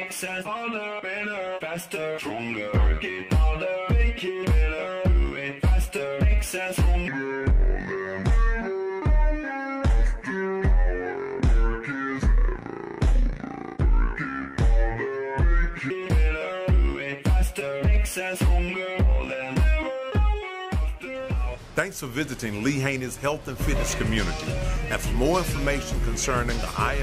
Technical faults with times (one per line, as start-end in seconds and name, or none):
7.08-15.90 section at the wrong speed